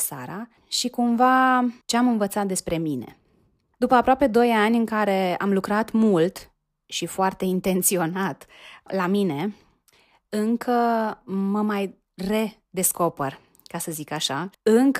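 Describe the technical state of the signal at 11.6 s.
At 11.6 s the speech signal is intact, with no dropout, distortion, glitch or other fault to be heard at that moment.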